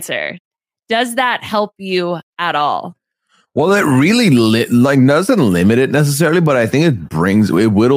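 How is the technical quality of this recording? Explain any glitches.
Three isolated ticks mar this speech recording, all of them bit error spikes. The first comes at 5.62 s, between "like doesn't" and "it necessarily", and the second at 6.46 s, between "it necessarily" and "I think". Each is a single corrupted sample peaking at about -11 dBFS. The third, at 7.64 s, spans three consecutive samples at about -17 dBFS. A flipped bit throws the sample value off by a power of two before it snaps back, producing a sharp click unrelated to the speech. On a waveform each shows as a lone vertical needle, and on a spectrogram as a thin full-band vertical stripe.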